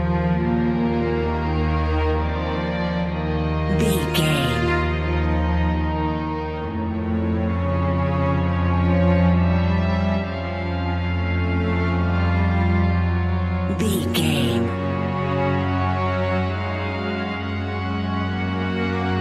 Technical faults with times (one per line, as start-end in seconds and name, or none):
none